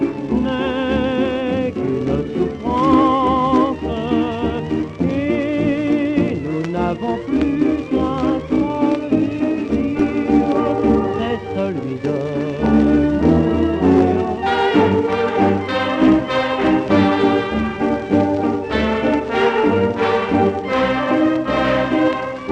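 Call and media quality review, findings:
No dropouts, level disturbances, distortion or timing irregularities were found anywhere in the signal.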